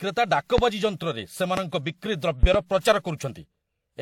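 From the first moment to the end, the speech carries the combined smearing of transcoding between lossy codecs, likely a pass through a WMA encoder near 96 kbit/s followed by HE-AAC at around 40 kbit/s. Each stage adds its own coding artefacts on top of the last, so the different artefacts are heard together. On a spectrogram, energy stops sharply at 18.4 kHz across the whole clip, with blotchy, quantised patches in the upper bands.

Four loud pops break through at 0.58 to 0.62 s, 1.57 to 1.61 s, and 2.43 to 2.58 s, the last being a double pop in quick succession. Each is a sudden voltage step or pulse, likely from a plug, switch or static discharge, that the downstream circuitry shapes into a sharp thump while the speech continues underneath. They stand roughly 20 dB above the surrounding signal. The waveform shows tall, near-vertical spikes, and the spectrogram shows thin vertical broadband stripes spanning all frequencies up to the 18.4 kHz cut-off.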